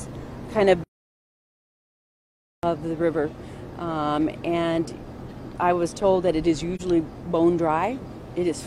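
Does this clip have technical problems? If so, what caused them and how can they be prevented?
Yes. Playback stall, 0.84 to 2.63 s: the sound stops mid-flow for about 1.8 s, likely because the player ran out of buffered data or its thread was blocked. Larger playback buffers and keeping the audio thread free of blocking work prevent this.

AAC frame loss with muting, 6.75 to 6.81 s: a brief 43 ms dip, consistent with a single lost frame whose spectrum the decoder zeroed. Reliable transport with retransmission or error concealment in the decoder prevents this.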